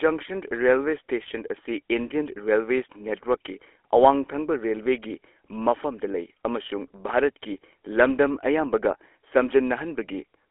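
Throughout the speech, the audio carries the sound of the GSM full-rate codec, with plainly audible damage. The codec rebuilds the voice from a vocal-tract model driven by a sparse, regularly spaced pulse excitation, which gives the speech a buzzy, gravelly roughness, consistent with a 13 kbps GSM full-rate stream. The band sits roughly within 300 Hz to 3.4 kHz, and nothing comes through above 3.8 kHz, so the sound is narrow and muffled.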